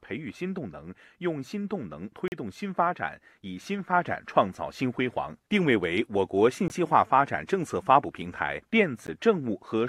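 At 2.28 s the speech falls into a block of digital silence lasting 40 ms, through 2.32 s. A 20 ms block follows at 6.68 to 6.70 s, and one of about 15 ms at 9.07 s. Each time, samples were replaced with zeros, so the signal stops and restarts with no fade. The first sounds like a short hole and the last like a tick. On a waveform each block is a flat line at zero. On a spectrogram each is a blank vertical strip.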